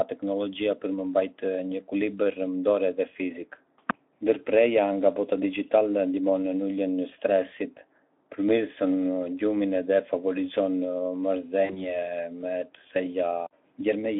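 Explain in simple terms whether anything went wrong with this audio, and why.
One thing goes wrong, at about 11.65 s: a short patch of VoIP packet loss concealed by the speech codec. Roughly 40 ms of audio went missing, which points to a couple of dropped packets. Instead of leaving a gap, the decoder guessed by stretching the last bit of sound it had, so you hear a brief stretched, fading smear. It takes until about 11.96 s to settle, because each guessed frame builds on the previous one.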